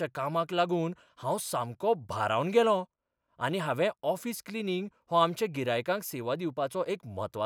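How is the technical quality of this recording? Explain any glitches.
No glitches or faults detected.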